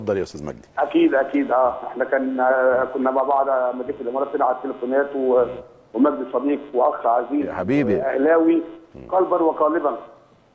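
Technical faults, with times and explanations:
Nothing stood out on listening, and there is no moment worth flagging.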